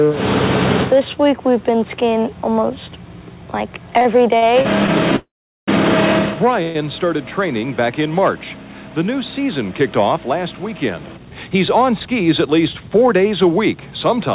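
Repeated stalls (stutter) between 3.98 and 4.89 s: five short gaps, the longest 48 ms, are filled by extending the preceding sound because late packets kept draining the jitter buffer. A call audio freeze runs from 5.16 to 5.69 s, where the sound is stretched and then falls silent for 410 ms, and a shorter freeze from 6.63 to 6.76 s is filled for 121 ms without going quiet. Both likely come from held-up packets that insert a pause without losing audio. A jitter buffer speed-up from 11.37 to 12.90 s runs the sound about 7% faster at unchanged pitch, trimming roughly a tenth of a second to cut accumulated delay. Throughout, the audio is band-limited with nothing above 4 kHz, which fits a narrowband call codec such as G.711.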